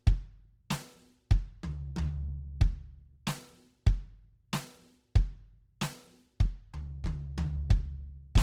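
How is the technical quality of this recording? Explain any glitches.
Plainly audible Opus compression runs through the whole music clip. The likely cause is a CELT-mode Opus encode at a rate that fits 16 kbps, which fills starved bands with folded or noise content. Tones come out grainy and rough, though the audio still reaches 20.2 kHz.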